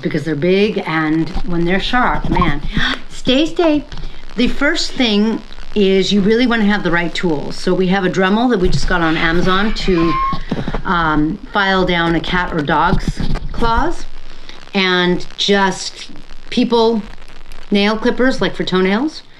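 No technical faults can be heard anywhere in the recording. Nothing in the audio points to a break in the signal or to trouble anywhere along its path.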